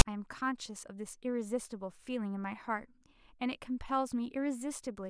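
At the very start of the speech, at 0.0 s, there is a brief case of file tags played as audio: a block of text metadata was decoded as if it were sample data. Because text bytes cluster in a narrow range of values, the result is a loud, harsh rasp pushed off-centre. On a waveform it appears as a dense, hard-edged block sitting offset from the zero line; a spectrogram shows a short broadband smear with abrupt vertical edges.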